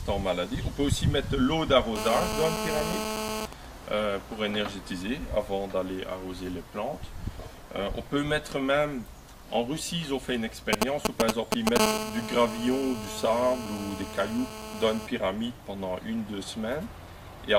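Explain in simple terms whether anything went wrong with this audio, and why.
A mobile phone was sitting too close to the recording gear, and it shows up in two ways.

GSM phone buzz, from 1.96 to 3.46 s and again from 11.80 to 15.07 s: a hard, raspy 217 Hz buzz while the phone is in a call. The audio circuit picks up the phone's radio pulses, 217 every second, and turns them into sound. The buzz is nearly as loud as the audio itself.

GSM signalling bursts, from 3.53 to 4.37 s and from 10.73 to 11.78 s: the phone is only sending short groups of pulses. The first patch sits well below the audio, with even ticks and a longer buzz twice a second, which is the call going quiet at the phone's end. The second is louder than the audio, a galloping dit-dit-dit as the phone signals right before the second buzz begins.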